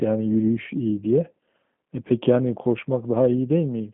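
From start to finish the speech carries G.729 codec damage, here the G.729A variant. The codec does not store the waveform. It rebuilds each 10 ms frame from a vocal tract filter, a pitch predictor and a few pulses. That sparse rebuild makes the speech sound rough and slightly synthetic, and the damage is plainly audible. The sound is squeezed into a phone band of 150 Hz to 3.4 kHz. Nothing survives above 3.6 kHz, which fits an 8 kbit/s stream.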